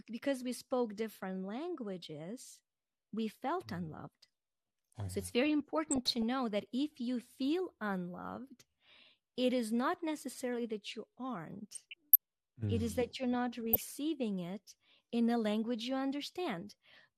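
Throughout, the speech is dull and granular, likely from MP2 compression at a rate near 80 kbps, with upper sub-bands switched off rather than smeared. DAB burbling at 5.87–6.23 s, 11.73–12.16 s and 13.73–13.84 s comes from bit errors reaching the sub-band data, causing brief blips of noise in single sub-bands instead of steady dullness.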